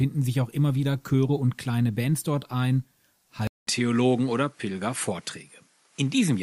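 At 3.47 s the audio drops out for about 200 ms, and from then until the end it sounds duller, with nothing above about 11.3 kHz and a faint new background noise roughly 50 dB below the signal. The level stays about the same. This is likely an input switched to a poorer device: the recording path jumped to a different microphone or headset profile with narrower bandwidth and its own noise floor.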